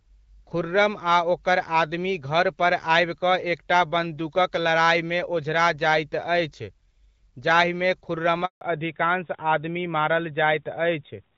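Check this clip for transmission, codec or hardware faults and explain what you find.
Two faults show up near the end, both tied to a network switch.

At 8.45 s there's a handover gap: the sound cuts out for 160 ms while the call hops networks and no frames arrive, so that stretch is simply gone.

From 8.61 s to the end comes a fallback to narrowband. The call drops to a narrowband codec, likely AMR-NB, and everything above 4 kHz disappears, leaving the sound duller and rougher. Before the switch, the HD Voice speech sounds clear, with only light coding damage, which fits AMR-WB at about 12.65 kbit/s.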